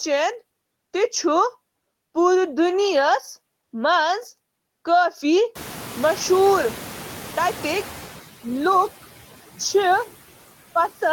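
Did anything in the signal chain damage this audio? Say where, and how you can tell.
Yes. The damage happens at the call-processing stage, where a noise suppressor leaves artifacts for the whole clip. It pulls the steady background down by about 13 dB, but only between words. Under the speech the noise comes back up. On a spectrogram the noise floor looks blotchy and pumps in time with the syllables, with isolated tonal specks instead of a smooth, even haze.

The same processor is then caught catching up. At around 5.5 s the room noise rises sharply, by about 25 dB, and afterward sits roughly 16 dB below the speech. From 5.55 to 8.16 s the suppressor's noise estimate lags behind, so the louder background passes with only about 8 dB of reduction before it sinks as the estimate adapts over about 2.6 s. A spectrogram shows a bright band of noise that fades gradually, not a sudden cut.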